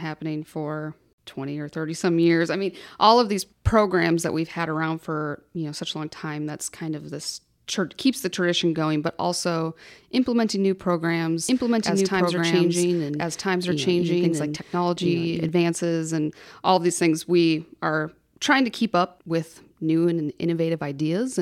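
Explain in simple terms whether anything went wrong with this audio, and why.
A doubled audio track likely came from the speech being captured twice, with the second copy running about a second and a half late. From 11.49 to 15.49 s you hear both at once, the late copy about equally loud, starting and stopping abruptly.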